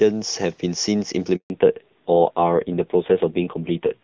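At 1.36 s the sound cuts out in a handover gap: the call switches networks and no speech frames arrive for 140 ms. The audio decays within a few tens of milliseconds and stays silent until 1.5 s, losing whatever fell in that window.

From 1.5 s to the end comes a fallback to narrowband. Before it, the clean wideband sound fits AMR-WB HD Voice at a high rate. After it, nothing above 4 kHz remains, and the dull, rough texture fits low-rate AMR narrowband, around 5.9 kbit/s.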